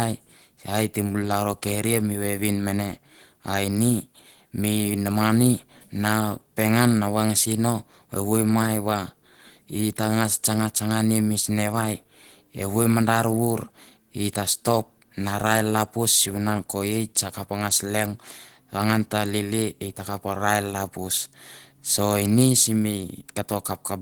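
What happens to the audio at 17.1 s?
At 17.1 s, as throughout, Opus voice compression at 16 kbps in hybrid mode codes the excitation coarsely, leaving the speech audibly hoarse and slightly robotic.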